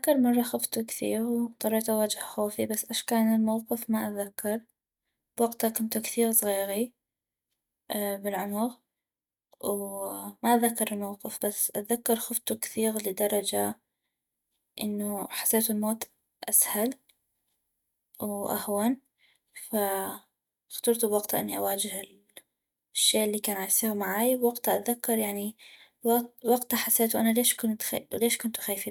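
Speech recording, no audible faults.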